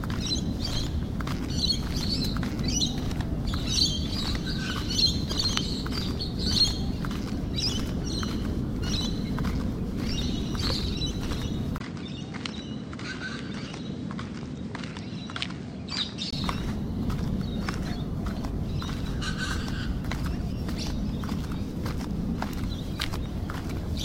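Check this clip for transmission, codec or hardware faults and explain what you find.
One fault is present. From 11.78 to 16.33 s, the audio likely switched to a poorer input device: a 20 ms gap, then dull sound cut above 9 kHz, roughly 5 dB quieter, with new noise. The spectrogram shows a flat ceiling at 9 kHz; the waveform visibly shrinks.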